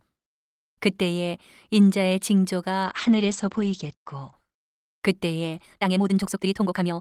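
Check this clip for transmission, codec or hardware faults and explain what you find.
Two faults are audible in this speech clip. From 2.85 to 4.39 s there is a call bitrate drop: the encoder's rate falls, consistent with roughly 48 kbps down to about 11 kbps. The coarser coding sounds rough and watery, and the audio band narrows from 20 kHz to 8 kHz, worst for about 1.3 s. From 5.61 s to the end, the pace jumps to about 1.76 times faster while pitch holds, sounding rushed. This is likely a time-stretched section, with short pieces dropped to shorten the audio.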